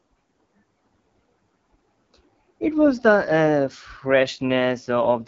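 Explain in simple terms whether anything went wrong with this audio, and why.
The speech went through an AMR wideband (HD Voice) codec, the phone-call compression, at one of its lowest settings. From start to finish it sounds rough and raspy, with nothing above about 7.5 kHz, so the crisp top end is gone.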